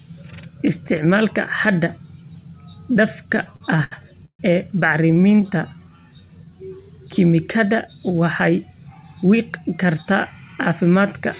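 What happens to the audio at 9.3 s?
At 9.3 s the speech runs hurried but at unchanged pitch, about 9% fast from 8.79 to 10.81 s. This jitter buffer speed-up trims short pitch-period slices repeatedly, removing roughly a fifth of a second to drain excess buffered delay.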